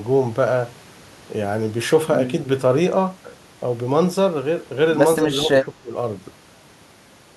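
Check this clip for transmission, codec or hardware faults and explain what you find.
One fault is audible. Speech suppressed in double talk, 5.25 to 5.94 s: an echo canceller, likely ducking its own talker during overlap, drops the speech about 10 dB in patches.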